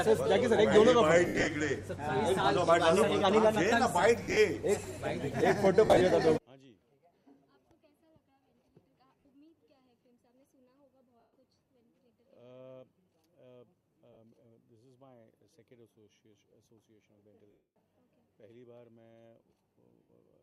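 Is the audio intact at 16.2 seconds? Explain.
Yes, the audio is intact at 16.2 seconds, with no fault audible at that moment.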